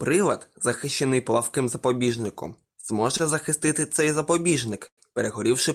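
At 2.81 to 2.85 s, 3.17 to 3.22 s and 4.88 to 4.99 s the speech briefly hangs, with a sound held too long and a faint buzz or dip. Each is a short stall from a late packet: the jitter buffer ran dry, and the receiver stretched the last audio for 20, 24 and 99 ms until the packet arrived. It then resumed at the same point, so nothing is lost, but the timing slips.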